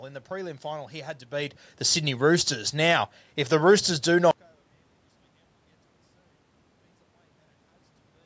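From 4.31 s to the end of the clip, the speech collapses to a faint residue, roughly 35 dB quieter. A talker shifting position, as happens around 4.5 s, could not account for a drop this deep. The likely cause is one channel inverted: with one stereo side in reversed polarity, everything common to both channels cancels when they are summed to mono, leaving only their small differences.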